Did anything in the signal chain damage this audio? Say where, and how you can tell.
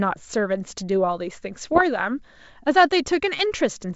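Yes. Bit errors on an ADPCM link, in the G.722 transmission, corrupted the speech from 1.64 to 1.82 s. Flipped bits, at a rate of under one percent, knock the decoder's step size and predictor off track, so the sound there turns to pops and rough bursts with brief level jumps before recovering.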